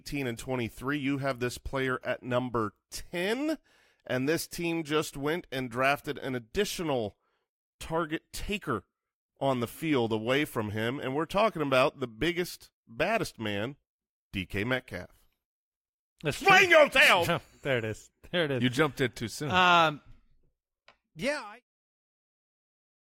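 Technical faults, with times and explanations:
No technical faults can be heard in this speech recording. Near the end the level eases down in a smooth fade out, starting around 21 s and reaching silence at 21.65 s with no click or hard edge.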